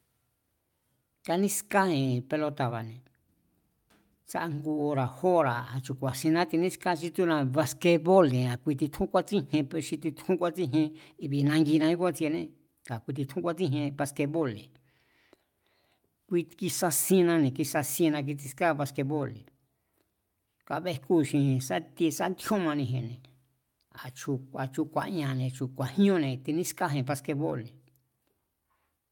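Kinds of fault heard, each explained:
No technical faults can be heard in this speech recording. There are no dropouts, glitches or other disturbances anywhere in it.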